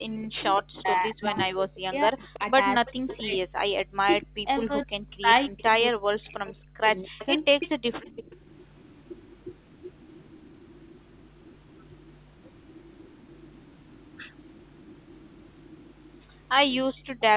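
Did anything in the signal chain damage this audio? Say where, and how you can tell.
Yes. Speech suppressed in double talk, 0.0 to 8.4 s, likely from the call's echo canceller: level dips up to about 40 dB, showing as gaps and thinned bands on the spectrogram.

Echo leak, likely from a loudspeaker endpoint, at 2.33 to 3.17 s, 4.22 s, 5.58 s and 7.19 to 12.16 s: a faint copy about 20 to 30 dB down, delayed 260 to 290 ms.

Background gated by the echo canceller, 16.94 to 17.14 s: room sound drops about 31 dB for roughly 150 ms, a visible notch in the waveform.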